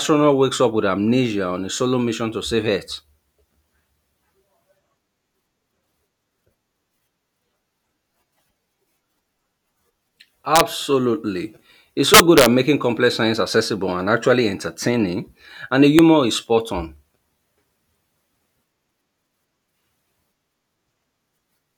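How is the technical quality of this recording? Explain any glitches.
The recording has integer overflow on three loud passages. Peaks exceeding the integer limit wrap to the opposite sign instead of flattening as clipping would, so each one gives a violent crack. From 10.56 to 10.61 s, with about 1 dB of overdrive, there is a brief crack. From 12.14 to 12.46 s, just before "making complex science accessible", the overdrive is about 5 dB and gives a longer burst of cracking. At 15.99 s, between "actually entertaining and the" and "is spot on", about 1 dB of overdrive gives a single sharp click.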